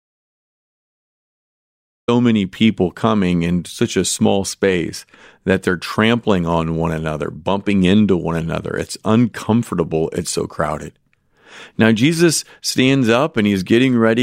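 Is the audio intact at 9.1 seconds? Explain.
Yes, at 9.1 seconds the speech plays through intact, with no dropout, click, distortion or other fault at that moment.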